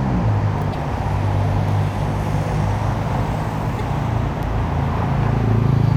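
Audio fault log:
0.72 to 0.75 s and 3.78 to 3.81 s, broken MP3 bit reservoir. Each time the sound jumps ahead, and a short stretch of about 30 ms decodes wrongly instead of the real audio. The likely cause is a cut in the MP3 stream. The next frame then reaches back for borrowed data and decodes bytes from the wrong frame. The stretch length fits one frame of about 26 ms.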